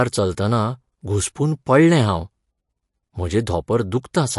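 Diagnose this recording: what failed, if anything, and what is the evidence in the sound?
Codec stage: the speech has nothing above 11.3 kHz and a watery, smeared sound throughout, likely MP3 compression starved of bits, fitting roughly 50 kbps.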